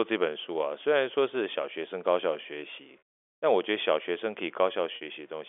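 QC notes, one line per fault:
2.99–3.02 s and 4.96–5.01 s, packet loss with pitch repetition: two short dropouts, 30 ms then 50 ms (which fits three and five 10 ms packets), patched by looping the last pitch cycle, so you get a brief held, slightly buzzy tone before the sound picks back up.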